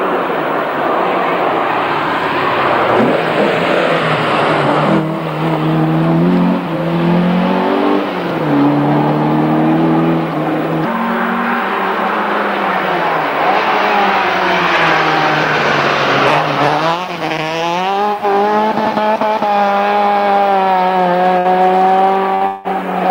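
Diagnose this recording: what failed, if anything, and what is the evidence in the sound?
Burst of packet loss at 21.39 to 21.48 s and again at 22.35 to 22.44 s, a network-stage fault. Each time about 60 ms of audio goes missing. The receiver extends the last sound for about 60 ms, fading it, then resumes later with that stretch skipped.

Long network dropout at 22.47 to 22.68 s. The sound freezes into a fading continuation lasting about 180 ms without reaching silence. It then jumps ahead, and about 180 ms of audio is gone. The likely cause is a longer stall in packet delivery.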